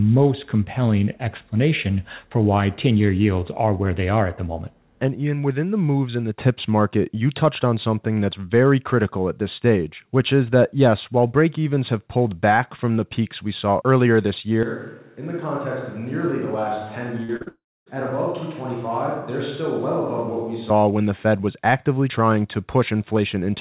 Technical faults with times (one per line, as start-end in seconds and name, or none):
14.63-20.70 switch to a distant microphone
17.24-17.48 short concealed packet loss
17.48-17.88 long network dropout